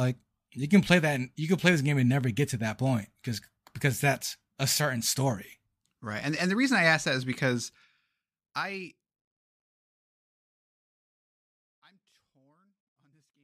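No technical faults are audible.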